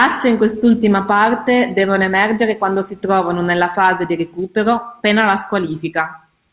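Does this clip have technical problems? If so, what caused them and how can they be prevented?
No, there are no technical faults to report or prevent; the speech reached the listener over a call path using G.711 A-law at 64 kbps, so the band stops at 4 kHz, as that codec is designed to do.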